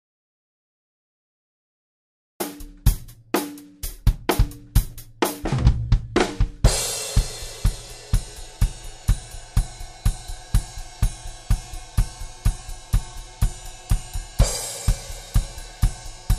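From the very start until about 2.40 s the clip is in an audio dropout to silence: the first 2.4 seconds are pure silence, with no room tone or noise floor at all, and the sound then enters abruptly mid-flow. The fault is already under way when the file begins. The likely cause is a lost input, such as a disconnected device, a failed link or a mute, while the recorder kept writing empty samples, so anything from that stretch is gone.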